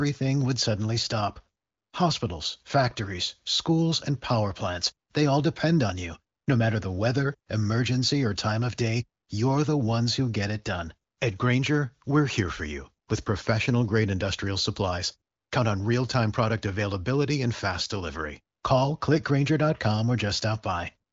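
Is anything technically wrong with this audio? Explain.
No, nothing is technically wrong with this audio.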